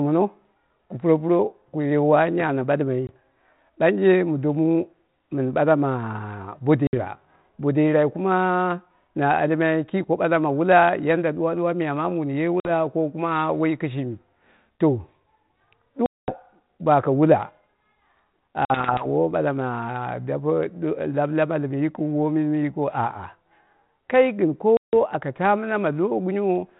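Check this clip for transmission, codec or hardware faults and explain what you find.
Six gaps of packet loss on an ADPCM call break up this speech, at 3.07 s (20 ms), 6.87 s (60 ms), 12.6 s (50 ms), 16.06 s (220 ms), 18.65 s (50 ms) and 24.77 s (160 ms). The underlying narrowband coding sounds consistent with G.726 at about 32 kbit/s. Each lost stretch becomes hard-edged silence, and the decoder's predictor and step size drift from the sender's. Speech therefore resumes with brief, slight distortion that settles within tens of milliseconds. A waveform shows flat gaps with abrupt edges. A spectrogram shows blank vertical bands.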